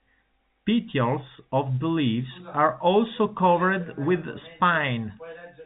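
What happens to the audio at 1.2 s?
Nothing goes wrong at 1.2 s: the speech carries on intact through that moment, with only the narrow telephone band of G.711 coding, which lets nothing through above about 3.8 kHz.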